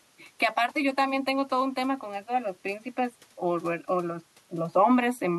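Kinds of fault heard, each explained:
Nothing faulty turns up anywhere in this bit of speech, so there's no fault to list or explain here.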